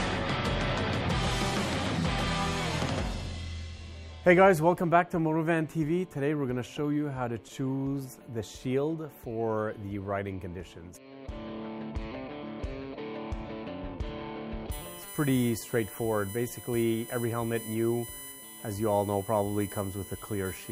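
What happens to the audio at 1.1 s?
Nothing goes wrong at 1.1 s; the audio runs through that moment intact, with no dropout, click or distortion.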